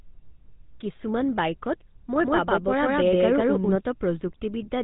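From start to finish the speech has a buzzy, gravelly roughness, with a dull, band-limited top end where nothing above 3.8 kHz comes through. This is the sound of the GSM full-rate codec, whose damage is plainly audible here. It models the vocal tract and excites that model with evenly spaced pulses that keep only a third of the excitation detail. That sparse pulse train produces the grainy buzz, at a rate that fits 13 kbps.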